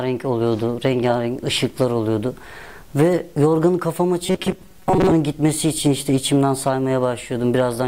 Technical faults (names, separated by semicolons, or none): robotic sound from repeated short buffers